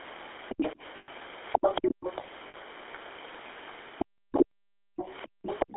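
The speech runs throughout through the GSM full-rate codec, whose pulse-driven vocal-tract model discards most excitation detail, which fits its 13 kbps rate. The line band is held to roughly 300 Hz to 3.5 kHz, and the voice carries a plainly audible buzzy, gravelly roughness.

From 0.96 to 1.09 s, lost GSM frames leave the decoder repeating the last good frame's settings. This 120 ms gap, which fits six lost 20 ms frames, comes through as a rough, metallic ring.

From 1.52 to 2.23 s, a second voice leaks through well below the main speech. This is likely the other side's voice escaping the echo canceller after playing from the talker's loudspeaker.

Inside that stretch, at about 1.80 to 1.89 s, the speech is suppressed in double talk, likely because the canceller turned down both voices while they overlapped. The main voice drops sharply and very deeply for roughly a tenth of a second.

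At 2.48 to 2.55 s, lost GSM frames return. This 60 ms gap fits three dropped frames, and the decoder again holds the previous frame, giving a shorter metallic ring.

From 4.97 s to the end, likely the other side's voice leaks through again under the speech, quieter than before.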